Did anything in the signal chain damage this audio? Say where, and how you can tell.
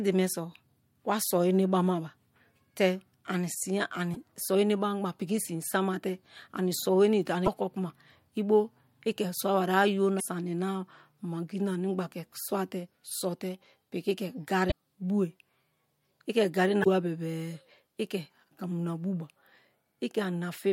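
Yes. The damage is at the codec stage: damaged data in a compressed stream. Short glitches of about 50 ms cut into the speech at 4.12, 7.43, 10.17, 14.68 and 16.81 s. Corrupted frames made the decoder lose sync until it found the next valid frame header.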